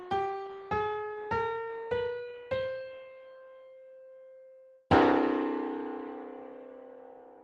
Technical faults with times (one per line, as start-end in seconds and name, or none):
none